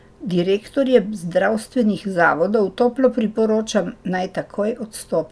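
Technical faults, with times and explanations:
No technical faults can be heard anywhere in the speech.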